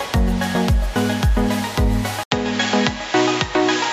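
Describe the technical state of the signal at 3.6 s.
At 3.6 s the signal is inside a stretch, from 2.23 s to the end, where the input likely switched to a poorer device. After an 80 ms silence at the switch, nothing reaches above 7.6 kHz, so the sound turns duller at an unchanged level, over a faint new noise floor well below the signal.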